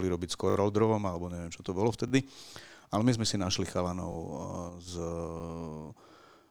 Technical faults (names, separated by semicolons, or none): repeated buffer; sudden gain jump